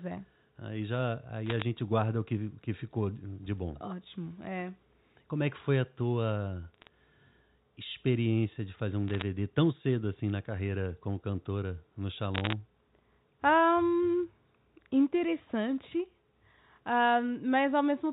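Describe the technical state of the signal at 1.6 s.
At 1.6 s the speech is in a burst of bit errors on a digital phone line, running 1.46 to 1.62 s, just before "guarda o que que". Flipped bits in the A-law telephone stream corrupt isolated samples, giving sharp crackling ticks that show as single-sample spikes on the waveform and thin vertical broadband lines on the spectrogram.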